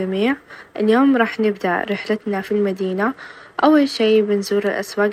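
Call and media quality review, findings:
Bluetooth SBC bit pool drop, 1.83–4.48 s: dull treble, gritty grain; spectrogram top band blanks. Fits bit pool halving, 28 to 14 (~108 kbps).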